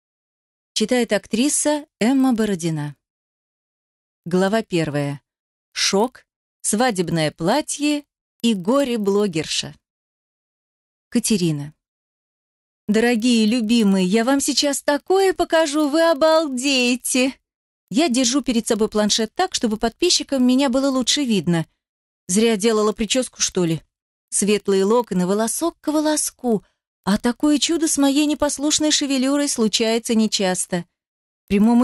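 A steady 25 Hz tick runs through the audio, present only when there is signal, from a resampler restarted on every block, consistent with a 2:1 upsample in 40 ms blocks.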